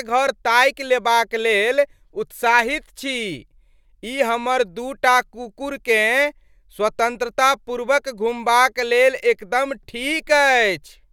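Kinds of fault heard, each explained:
Nothing here to flag: the speech comes through without a single technical fault to point to.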